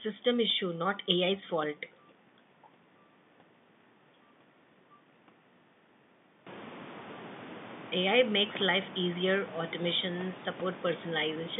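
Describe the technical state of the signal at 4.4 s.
At 4.4 s the audio is intact, with nothing but the ordinary narrow telephone band of G.711 coding.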